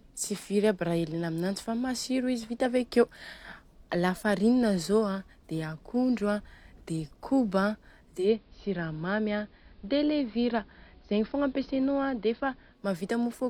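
From 8.15 s to 12.85 s the digital radio blends to analogue, cross-fading in 150 ms to the station's AM signal. The treble narrows to the AM bandwidth, the level drops about 1 dB, and faint hiss appears. That hiss and the full-bandwidth return distinguish it from filtering.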